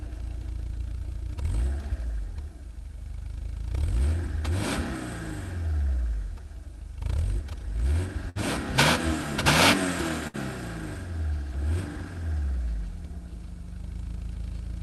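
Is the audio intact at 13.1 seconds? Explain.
Yes, the audio is intact at 13.1 seconds, with nothing breaking up, dropping out or glitching at that moment.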